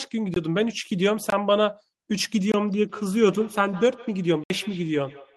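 At 0.34 to 0.36 s the speech drops out in a block of digital silence. It returns at 1.30 to 1.32 s and again at 2.52 to 2.54 s. Each gap lasts about 21 ms, which fits a 1024-sample buffer left unfilled in time. The signal cuts straight to silence and back with no fade, so each gap is heard as a short hole.

From 2.86 s to the end there is feedback echo between two devices. A second device nearby plays the call back, and its sound leaks into this microphone again. This device's echo canceller cannot remove sound that another device plays. The speech comes back roughly every 150 ms. It sounds thin and ringing. At its loudest it sits about 19 dB below the speech.

At 4.44 to 4.50 s another block of digital silence cuts in, about 64 ms long. It is long enough to be heard as a brief hole.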